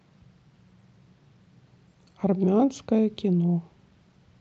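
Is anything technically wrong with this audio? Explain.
No, nothing in this speech recording stood out as a technical problem on listening.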